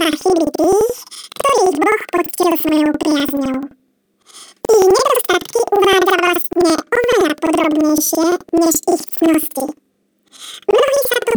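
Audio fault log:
throughout planar audio read as interleaved: speech sounds an octave high with an 11.7 Hz flutter, as each 85.33 ms block, consistent with 4096 samples, plays twice at double speed.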